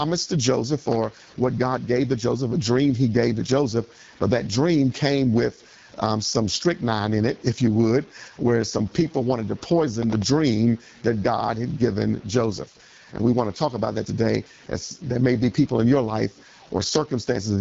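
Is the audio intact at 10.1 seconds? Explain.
No. From 9.88 to 10.22 s, right after "some people wanted to", the sound breaks into a gritty, tearing crackle. This is processor overload crackle: roughly ten consecutive tiny buffers, each well under a millisecond, missed their deadlines and replayed stale audio with hard edges.

Under that crackle, and across the whole clip, the speech is rough and raspy, with nothing above 7.3 kHz. That sound is the AMR wideband (HD Voice) codec at one of its lowest rates, which fits about 8.85 kbit/s. The vocal tract model strains, so the damage is plainly audible.

The quiet parts also carry a grainy distortion that follows the signal, sitting around 30 dB below it. Low bit depth without dither is the likely cause: rounding down to about 7 bits, so the error tracks the sound.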